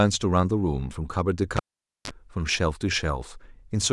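Speech with a cable pulled and plugged in from 1.57 to 2.11 s: a pop, about 489 ms of near-flat waveform, then a 30 ms burst of 50 Hz buzz showing as harmonic lines, and a second pop.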